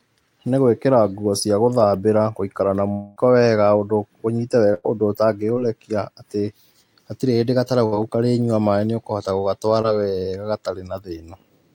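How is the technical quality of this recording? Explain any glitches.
The recording has three network-related glitches where stretches of audio never arrived and the receiver filled the holes.

From 2.91 to 3.18 s, a likely long network dropout loses about 240 ms; the last sound is stretched into a fading buzz or hiss, seen as a smeared, flat stretch.

From 4.74 to 4.86 s, a burst of packet loss drops about 100 ms; concealment holds then fades the sound, showing a tapering waveform and repeated spectral texture.

From 9.82 to 9.86 s, short concealed packet loss removes about 20 ms; the patched gap is a brief smear or wobble, visible as a blurred spectrogram slice.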